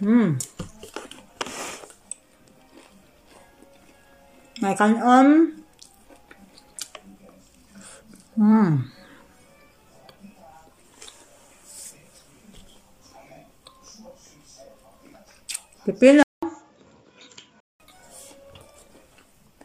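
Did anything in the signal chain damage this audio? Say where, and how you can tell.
Yes. At 16.23 s the audio drops out for about 0.2 s, then returns a few dB quieter and band-limited, with nothing above 7.6 kHz and a faint new noise floor, until 17.80 s. This is likely an input switched to a poorer device at the driver stage.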